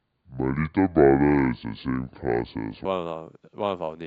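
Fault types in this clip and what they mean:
Section at the wrong speed: the speech from the start to 2.85 s plays at 0.621 times its proper rate, so it drags and sits about seven semitones low, then snaps back to normal pitch and pace, likely from that stretch being clocked at the wrong rate.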